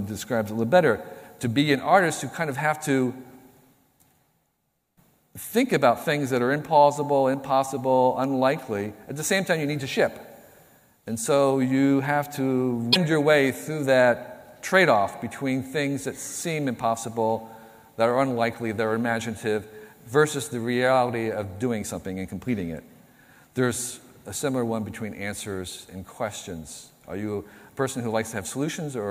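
Between 12.92 and 12.96 s the stream was likely cut mid-sequence and hit a broken MP3 bit reservoir: the frame after the gap reached back into earlier frames for the data it had borrowed and found bytes belonging to another frame. The audio jumps ahead there, and for about 44 ms, roughly two frames at the 26 ms spacing the timing suggests, the decoded sound is garbled before it recovers.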